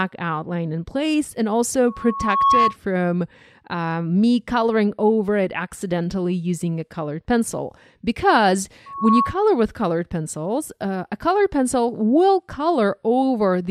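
A steady whistle at 1.1 kHz swells out of the audio twice, from 1.87 to 2.76 s and again from 8.86 to 9.42 s, climbing over most of a second the first time and about a third of a second the second, until it sits about 5 dB above the programme. This is loudspeaker feedback squeal: the microphone is hearing its own loudspeaker, and at 1.1 kHz the loop gain tops one, so that tone keeps reinforcing itself until the loop is broken.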